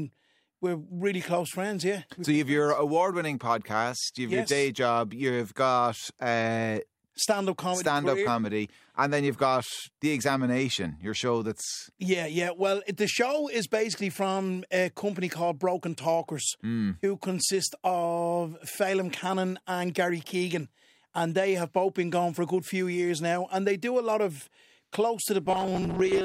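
From 25.46 to 26.24 s, robotic sound from repeated short buffers: a rigid 188 Hz buzz, likely a looping 5.3 ms slice, appearing as evenly spaced spectrogram harmonics.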